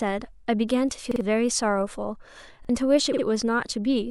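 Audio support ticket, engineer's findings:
Repeated buffer, 1.12–1.21 s and 2.65–2.69 s: short stutter of identical speech, fits a 2048-sample output buffer (46.4 ms) replayed on underrun. First repeats twice, losing about 100 ms; second once, about 50 ms. Waveform shows identical ~46 ms segments with hard joins; spectrogram shows vertical click lines.

Repeated frames, 3.12–3.23 s: stutter, consistent with a 52.2 ms block of compressed frames, about two, resent or rewritten. Block plays twice more, adding 104.5 ms. Waveform shows a duplicated block; spectrogram shows repeated pattern.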